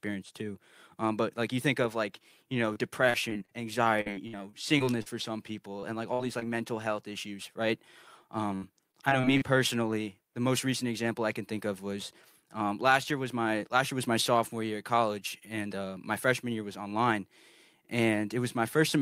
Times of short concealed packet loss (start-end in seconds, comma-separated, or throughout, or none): 5.80-5.84, 6.39-6.43